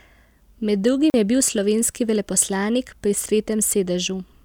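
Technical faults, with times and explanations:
1.10 to 1.14 s, block of digital silence: for 40 ms the speech is replaced by silence, the kind of gap left when the output stage has nothing valid to hand on and writes empty samples. Because the signal stops dead and resumes with no fade on either side, each edge is an abrupt step. At this length the cut registers as a brief hole in the speech rather than a single pop.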